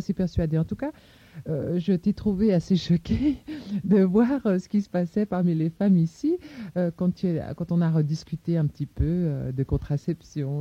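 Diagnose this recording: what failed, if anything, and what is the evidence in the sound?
The network delivery failed to keep up, so from 4.68 s to the end the player falls back to an adaptive stream at a lower bitrate, switching codec profiles mid-playback. The change is abrupt and gapless: the top end collapses and the treble is rebuilt synthetically, with a swirly, metallic edge. That points to a step down from roughly 96 kbit/s AAC-LC to a 32 kbit/s HE-AAC rendition that uses spectral band replication.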